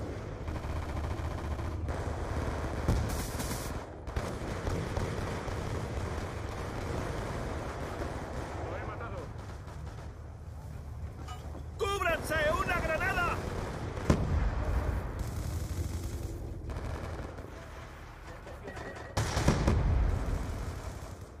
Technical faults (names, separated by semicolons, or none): doubled audio track